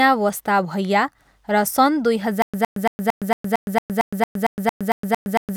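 A speech clip with a stutter with silent gaps from 2.42 s to the end. A 112 ms burst repeats every 227 ms, about 14 times, separated by 115 ms of digital silence. The likely cause is a stalled stream replaying its last fragment on each retry.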